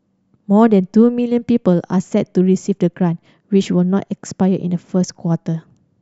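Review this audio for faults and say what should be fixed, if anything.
No faults found; nothing needs fixing.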